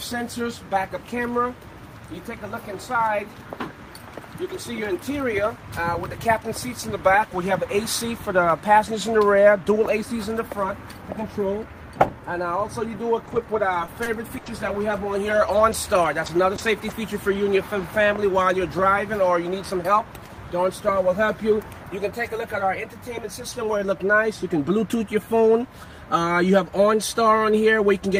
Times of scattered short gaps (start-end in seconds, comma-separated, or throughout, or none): 13.25-16.92